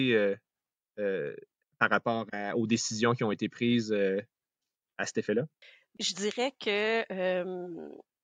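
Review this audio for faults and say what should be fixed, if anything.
Nothing here needs fixing, since no fault turns up anywhere in this speech clip.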